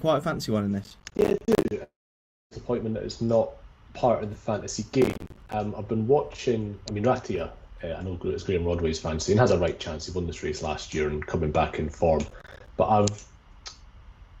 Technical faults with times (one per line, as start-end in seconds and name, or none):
0.84-1.71 processor overload crackle
1.83-2.53 long network dropout
5.02-5.53 processor overload crackle
12.28-12.68 processor overload crackle